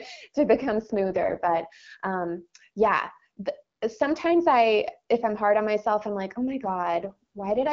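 At 0.52–1.60 s and from 6.63 s onward, an AMR rate drop, fitting 6.6 kbit/s, roughens speech. The spectrogram keeps full bandwidth without gaps, but harmonics blur into noise.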